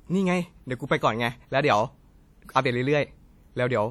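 From start to finish the speech carries a ringing, washy quality, with a hiss that rises and falls with the signal, the mark of WMA compression, likely the cause. A transform codec of this kind smears quantisation noise across long blocks, so errors spread tens of milliseconds around each sound, and weak spectral lines are dropped. The damage is plainly audible, which fits a bitrate around 48 kbps, though content extends up to about 20.1 kHz.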